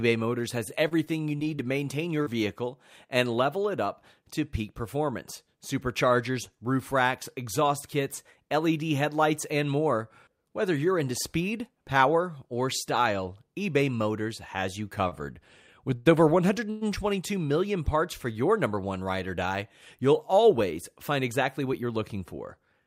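From 0.69 to 2.28 s there is repeated packet loss, giving a robotic sound. Six short holes, the longest 41 ms, were patched by extending the preceding sound, so about 120 ms of speech is missing. On a spectrogram, brief smeared, flattened harmonic patches interrupt the normal texture.

From 15.08 to 16.83 s, after "has you" and before "million parts for your", repeated stalls produce a stutter. The jitter buffer ran dry three times, and each wait was filled by continuing the last sound, up to 111 ms at once. Nothing is lost, but the speech drags and hiccups. The waveform shows stretched, repeated-looking segments with fades in the longer fills.

From 21.11 to 21.99 s, after "you'll always", a jitter buffer speed-up trims roughly 70 ms by cutting out pieces of one or a few pitch periods repeatedly. Speech runs at 108% speed with unchanged pitch and sounds hurried. The waveform looks compressed in time, while the harmonic spacing on the spectrogram stays the same.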